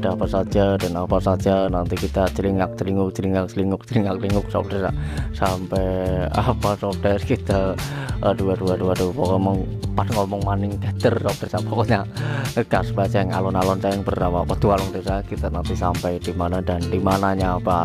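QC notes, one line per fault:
No faults heard anywhere in the clip. Nothing in the audio calls for a QC entry.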